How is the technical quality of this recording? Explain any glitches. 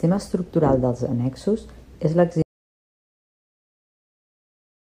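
The recording has one serious glitch: an audio dropout to silence from 2.42 s to the end. The input was likely lost while the recorder kept writing zeros, so the speech cuts off mid-flow into dead silence, with no room tone, for the remaining 2.6 s.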